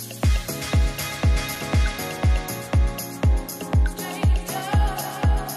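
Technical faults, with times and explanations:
1.56 s, block of digital silence: the audio drops out for about 2.9 ms and resumes with no fade, a gap that fits a 128-sample buffer left unfilled in time or a calculation that produced invalid values. At that length it is heard as a tick or brief dip. On the waveform it shows as a narrow flat notch at the centre line; on a spectrogram, as a thin vertical stripe spanning the frequency range.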